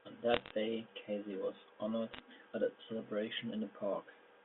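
From 0.34 to 0.51 s, and again from 2.13 to 2.20 s, bit errors on a digital phone line put a scatter of sharp ticks over the speech. A few tenths of a percent of bits were flipped in the logarithmic G.711 samples. Each hit on a high-order bit, or on the sign of a loud sample, throws a single sample far off, so the waveform shows isolated one-sample spikes and the spectrogram shows thin vertical lines running across the whole 250 Hz to 3.5 kHz line band.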